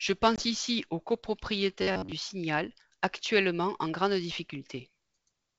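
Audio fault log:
0.36–0.44 s, packet loss on an ADPCM call: a 20 ms hole, about one packet, then the predictor mistracks, so "ici aux" returns slightly distorted.
1.82–2.12 s, robotic sound from repeated short buffers: about 94 Hz metallic buzz, likely from roughly 10.7 ms segments looping while most real audio is skipped.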